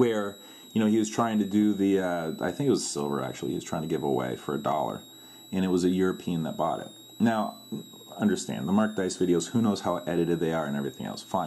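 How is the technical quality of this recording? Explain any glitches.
Quality's let down by one steady problem. Throughout, there's a switching supply whistle, a thin high tone wandering between 3.7 and 4 kHz, roughly 25 dB under the sound, from a power supply cycling in an audible burst mode or beating with another supply.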